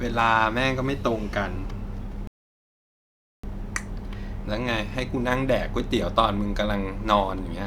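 At 2.27 s a rebuffering stall cuts the speech to silence until 3.44 s. The player ran dry. Speech resumes intact, adding about 1.16 s.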